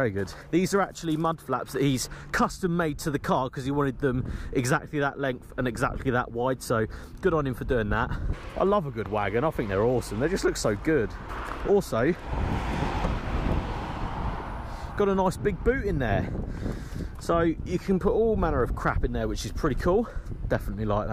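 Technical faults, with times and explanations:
No technical faults detected in this clip.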